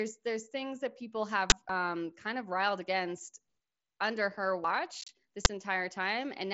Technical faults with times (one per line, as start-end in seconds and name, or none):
1.50-1.52 uninitialised buffer
1.69 audio missing between chunks
4.64 audio missing between chunks
5.01-5.09 unconcealed Bluetooth headset packet loss
5.45 uninitialised buffer